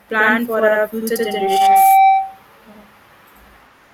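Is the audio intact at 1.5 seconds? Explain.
No. At 1.5 s there's a loudspeaker feedback squeal, running 1.16 to 2.38 s: a 773 Hz tone recirculating through the mic swells over about half a second to roughly 5 dB above the speech. Throughout, there's also channel delay (doubling): one channel lags by 85 ms, which fits a 4096-sample buffer, so the mono sum carries a slap-like second copy.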